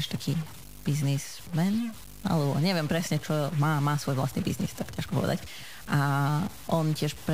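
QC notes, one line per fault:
Throughout, stuck bit: the speech carries a harsh, buzzy edge that rides along with the waveform instead of sitting underneath it. The likely cause is one data bit stuck at a fixed value, so about half the samples land off by that bit's weight, somewhere around -40 dBFS. Because the error tracks the signal's own values, it grinds like distortion. The gaps between phrases don't go quiet either; they fill with a gritty noise floor at roughly that level.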